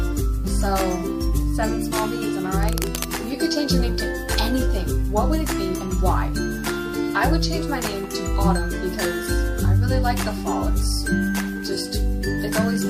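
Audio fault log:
2.63–3.04 s, cable scratch noise: A worn cable, connector or control was likely disturbed here, its contact resistance jumping about as the metal surfaces shifted against each other. That erratic resistance modulates the signal path and injects a dense, irregular spray of noise, roughly 10 dB below the audio, heard as a brief scratching, crackling rustle laid over the sound for about four tenths of a second.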